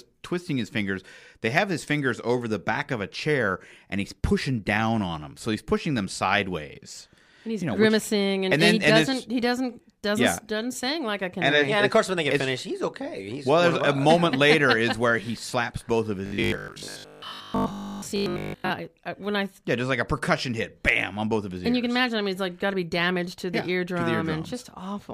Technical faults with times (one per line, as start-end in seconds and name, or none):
16.26-18.70 robotic sound from repeated short buffers